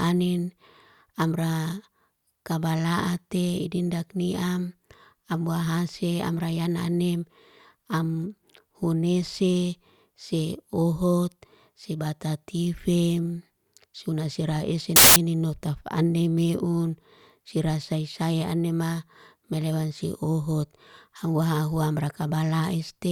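From 14.96 to 15.16 s, after "se batatifem suna seray", samples built from the wrong bytes let the fast low bits dominate, giving loud, harsh broadband noise.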